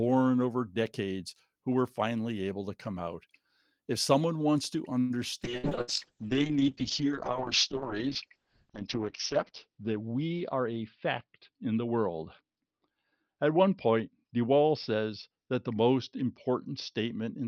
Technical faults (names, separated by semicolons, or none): call audio freeze; call bitrate drop; burst of packet loss; jitter buffer speed-up